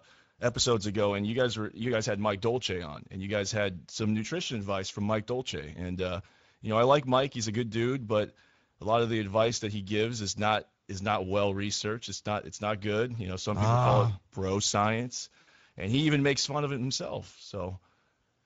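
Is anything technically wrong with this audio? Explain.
Yes, two faults are audible. Throughout, the speech sounds noisy and hoarse, with a grainy roughness. This is Speex codec damage: the CELP coder has too few bits to reproduce the excitation closely, which fits a bitrate of roughly 17 kbps.

From 15.41 to 15.49 s, the speech smears into a fading buzzy tone or coloured noise and stays weak briefly afterwards. This is VoIP packet loss concealed by the speech codec. About 60 ms of audio went missing, which points to three lost frames. The decoder filled the gap by repeating its last pitch and filter at falling gain.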